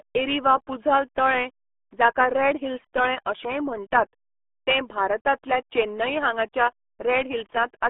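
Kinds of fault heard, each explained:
RealAudio 14.4 codec: an old dial-up speech codec squeezing everything into a tiny bitrate, which sounds like 8 kbit/s or so. Nothing survives above about 3.8 kHz, the band sits around 250 Hz to 3.5 kHz, and the damage is heavy: muffled, gargly speech.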